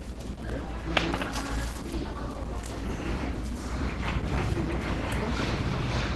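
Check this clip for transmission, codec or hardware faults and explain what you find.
One codec fault runs through the whole clip. Likely Opus compression at a low bitrate, around 16 kbps, in hybrid mode: nothing above 12.1 kHz survives, and the sound is plainly muffled, hoarse and grainy.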